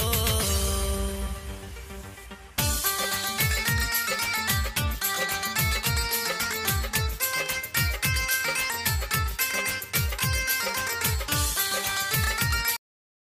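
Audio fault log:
12.76 s, cut-off end: the sound stops mid-event because its final buffers never reached the output, leaving about 0.6 s of digital silence with no decay. The waveform shows a sheer vertical edge to a flat zero line, and the spectrogram shows energy ending abruptly across all frequencies.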